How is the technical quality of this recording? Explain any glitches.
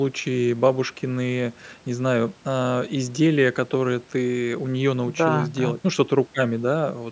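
No glitches turn up anywhere in the speech, which has passed through a call's microphone processing, so the content stops around 8 kHz and the lowest bass is trimmed, as that path normally does.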